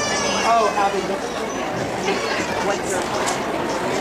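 From 1.05 s to the end, the audio suddenly runs about 1.41 times faster than before, a time-stretched section that sounds rushed. The pitch stays where it was. That separates it from a simple playback speed-up, which would raise the pitch along with the tempo. The likely cause is software squeezing this part to fit a shorter length, keeping pitch steady by dropping short slices of the signal. The abrupt jump in pace at 1.05 s marks where the stretch begins.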